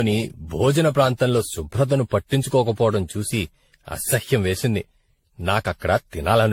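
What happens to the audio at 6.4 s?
At 6.4 s the speech sounds swirly, hollow and smeared, with consonant attacks blurred and no content above 16.6 kHz. This isn't a local event: the same degradation runs through the whole clip. The likely cause is generation loss, with the audio decoded and re-encoded around ten times through a lossy codec, which fits repeated AAC-LC passes near 64 kbit/s. Each pass requantises on a shifted frame grid, so noise and spectral holes accumulate beyond what one encode would leave.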